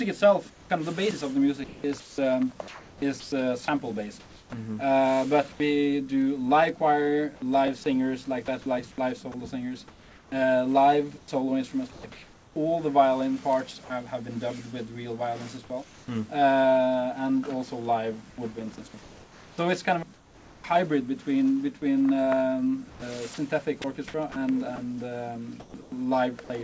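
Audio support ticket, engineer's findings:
Sound chopped by the voice detector: holes at 0.5–5.6 s (1.44 s replaced), 8.46–12.56 s (1.14 s) and 22.9–26.5 s (0.5 s). Parts of the sound itself are swapped for synthetic fill, likely sender VAD gating.

Repeated buffer: click/buzz at 7.67 s. One ~10.7 ms piece plays twice with a hard join, fitting a 512-sample buffer; about 10 ms of new audio lost. An exact repeat, not noise fill.

Comfort noise in place of the background: 15.84–16.08 s, smoother background about 3 dB quieter (background about 26 dB below loud parts); 18.3–20.64 s, 1.14 s replaced. Likely DTX; only pauses affected, sound intact, unlike VAD chopping. Call codec path cuts everything above 8 kHz.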